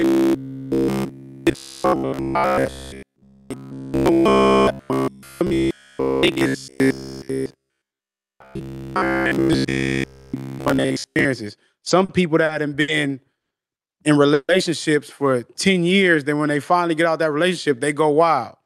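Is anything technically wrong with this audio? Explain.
Yes, there are several distinct faults across this speech clip.

From 0.02 s to 11.25 s the voice has a rigid, metallic buzz pinned at about 66.8 Hz, with the speech contour only loosely riding on top, and this lasts right through that stretch. This is robotic sound from repeated short buffers. Audio was likely arriving too slowly, so playback kept looping the last fragment of roughly 15 ms, whose repetition rate imposes that fixed pitch.

From 11.73 s to 12.90 s the speech drags and stumbles in six small hitches. This is repeated stalls (stutter): packets kept arriving late, the jitter buffer emptied each time, and the receiver stretched the last sound to cover 180 ms in total, the longest hold about 70 ms. Nothing is lost, but the rhythm breaks up.

Two brief call audio freezes follow, from 13.40 s to 13.53 s and from 14.34 s to 14.51 s. 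The first is a 110 ms hole of silence. The second inserts 150 ms, ending in about 40 ms of silence. Held-up packets likely drained the buffer. Speech then resumes exactly where it stopped, adding delay without dropping content.

From 15.67 s to 17.03 s the voice slows to about 90% speed at unchanged pitch, with drawn-out sounds. This is a jitter buffer slow-down: the receiver repeated single pitch periods or pause fragments to rebuild its reserve, adding 139 ms. The Opus call path at 64 kbps caps the audio at 12 kHz.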